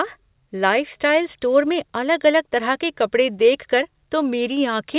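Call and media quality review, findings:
No faults found in the speech. It was carried over a WebRTC call path with nothing above 4 kHz, a narrowband sound that fits G.711 A-law at 64 kbps.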